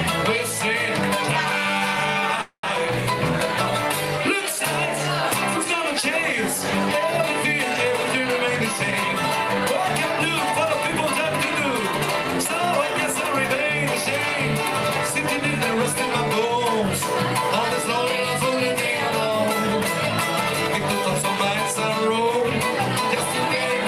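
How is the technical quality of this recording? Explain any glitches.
The recording has two timing glitches.

From 2.41 to 2.65 s there is a call audio freeze. The sound stretches into a fading buzz or hiss that drops to about 100 ms of silence, then resumes where it stopped, likely because delayed packets drained the jitter buffer. On a spectrogram it appears as smeared horizontal bands followed by a blank gap.

From 21.22 to 22.42 s there is a jitter buffer speed-up. Repeated trimming of short pieces of one or a few pitch periods cuts roughly 40 ms, so the audio plays at 103% speed with unchanged pitch. The waveform looks subtly compressed in time.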